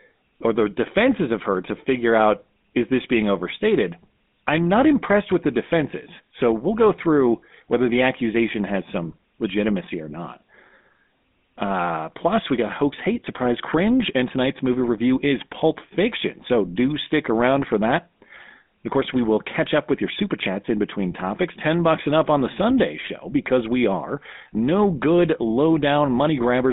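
Speech runs through a GSM full-rate codec for all of its length, with audible buzzy, gravelly roughness and a band of about 200 Hz to 3.6 kHz. The roughness points to coarse, about-13-kbps coding, not mere telephone band-limiting.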